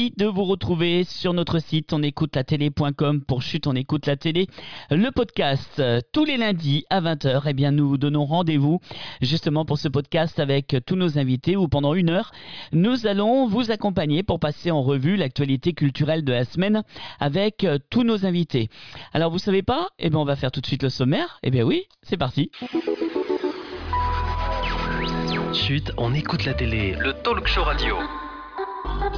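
No technical faults can be heard anywhere in the audio.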